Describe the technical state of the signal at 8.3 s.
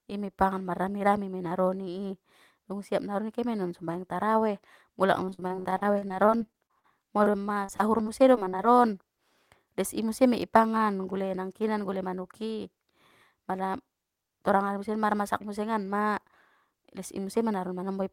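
At 8.3 s the speech sits inside a burst of repeated packet loss from 7.24 to 8.78 s. A dozen or so short holes, none longer than 43 ms, are patched by extending the previous sound. Unlike a single dropout, the rapid succession gives a choppy sound with pieces missing.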